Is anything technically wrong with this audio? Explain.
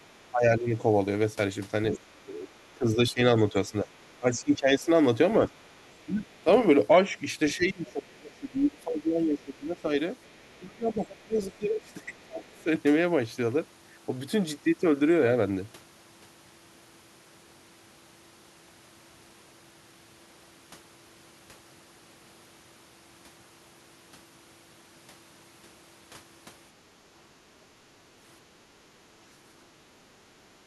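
Yes. Two-way echo cancellation has gone wrong in three ways.

From 0 to 12.67 s, speech is suppressed in double talk. The echo canceller likely mistook the overlap of both talkers for echo and turned the line down. The speech dips by as much as roughly 20 dB, adding up to around seven seconds of muffled or broken-up passages.

The other side's voice is leaking through at 1.93–3.96 s, 5.64–6.38 s and 10.24–12.62 s. This is probably loudspeaker playback that the canceller failed to fully subtract. It comes through as a faint second voice, roughly 20 dB below the main speech in the first stretch and much quieter, around 35 to 40 dB down, in the later two.

The background is gated by the echo canceller at 28.40–28.51 s and 30.61–30.65 s. The canceller clamped the microphone while the loudspeaker played, so the room tone briefly drops by about 11 dB and then about 8 dB before snapping back.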